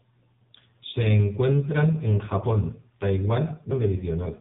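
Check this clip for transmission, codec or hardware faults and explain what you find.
Two faults are present: narrowband mobile coding across the whole speech clip, and one disc skip near the end.

AMR narrowband mobile codec, throughout: the speech passes through a vocal-tract model excited by sparse pulses, with nothing above 3.8 kHz surviving. The damage is heavy, giving a buzzy, synthetic, muffled quality that points to a low rate around 5.9 kbps.

CD skip at 3.71 s: the laser jumped to another turn of the spiral, so playback went silent for a very brief moment and resumed elsewhere. It is heard as a tick followed by an abrupt discontinuity in the speech.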